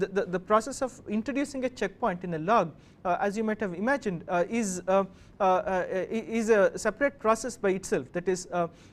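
Nothing goes wrong anywhere in the audio; there's no technical fault to point to at any moment.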